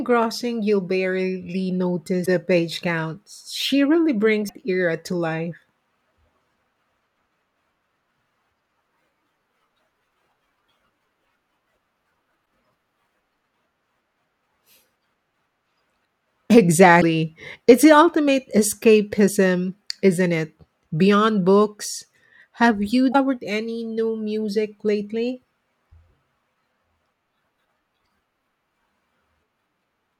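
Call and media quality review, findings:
Damaged data in compressed stream, five events: 2.22–2.26 s (between "you'll barely" and "page counts"), 4.45–4.51 s, 12.42–12.45 s, 16.98–17.03 s, 23.10–23.15 s (just before "any new"). Symptom: short chirp, squawk, click or hole, 24–54 ms. Component: decoder input, with corrupted bytes in the compressed stream. Mechanism: bad frames are misread or dropped, the decoder loses sync and resumes at the next valid frame header.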